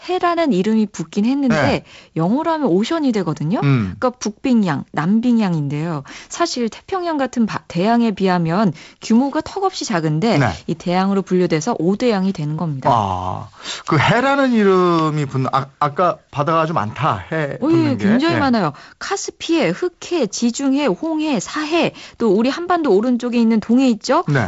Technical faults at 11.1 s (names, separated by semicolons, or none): none